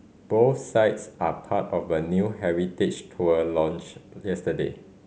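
A short speech recording with nothing technically wrong with it.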